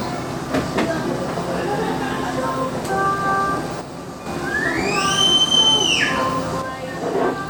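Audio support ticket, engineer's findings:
Level drops abruptly by about 6 dB, 3.81–4.26 s, then again from 6.62 s to the end. Sharp onset and recovery, no fade. Consistent with one channel drops out: likely a stereo channel lost upstream, so the mono sum keeps only half the shared content. Any material unique to the missing side vanishes entirely.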